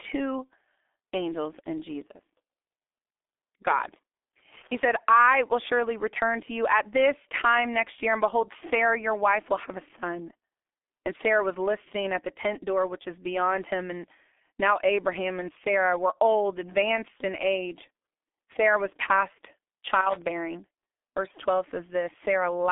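From the first second to the last, the speech carries the sound of the G.723.1 codec. It is a narrow, muffled telephone sound. The line band runs from 300 Hz to 3.6 kHz, and nothing reaches above 3.6 kHz. The codec rebuilds the voice from a slow, coarse model in 30 ms frames, which fits a bitrate near 6 kbit/s. The damage is heavy. The voice sounds hoarse, and consonants smear together.

From 4.53 to 4.81 s comes loose connector crackle, lasting about 0.28 s. It ends just before "I will surely return". A worn or dirty contact is making and breaking very fast as it shifts. Each break chops the signal. The result is a short, irregular burst of scratchy crackle laid over the sound.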